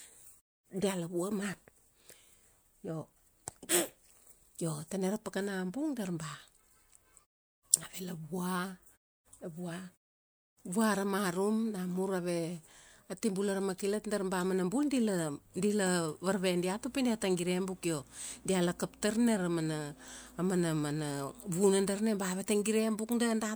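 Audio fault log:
No faults are heard anywhere in this speech recording.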